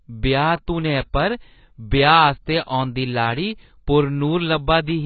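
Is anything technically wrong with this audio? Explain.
Yes. Throughout the speech, the sound is dull and smeared, with nothing above 4.5 kHz and a warbling, fizzy texture on sibilants. This is likely heavy AAC compression: the encoder drops the upper band and coarsely quantises what remains, which fits a bitrate around 16 kbps.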